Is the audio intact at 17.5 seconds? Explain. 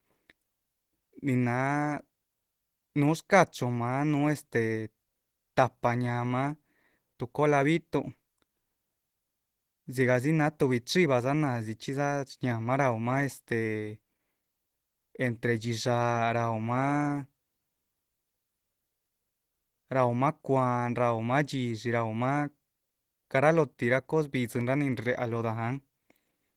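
No. At 17.5 seconds the speech carries plainly audible Opus compression, present throughout the clip, likely from a low bitrate around 16 kbps in hybrid mode. The encoder spends scarce bits band by band, filling gaps with noise, so the speech sounds hoarse and grainy, though content still reaches about 20.1 kHz.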